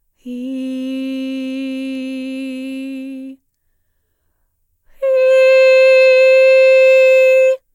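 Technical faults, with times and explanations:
Nothing technical trips up this bit of music; there's no fault to report.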